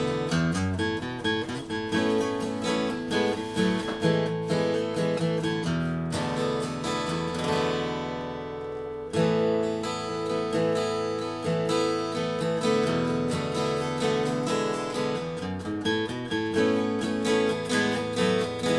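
Nothing in the audio stands out as a technical problem, so there's nothing here to flag.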